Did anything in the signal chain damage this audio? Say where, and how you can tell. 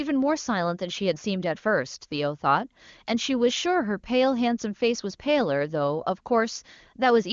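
No, nothing in the chain damaged this speech; it simply passes through an HD Voice (AMR-WB) link with nothing heard above about 7.2 kHz, and the clarity points to one of that codec's higher rates, around the top 23.85 kbit/s mode.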